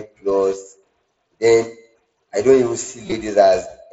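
Speech over an mSBC Bluetooth headset link, with concealed Bluetooth headset packet loss from 3.06 to 3.12 s: roughly 45 ms of dropouts patched with repeated recent waveform, giving brief buzzy smears that sound like half a dozen lost packets.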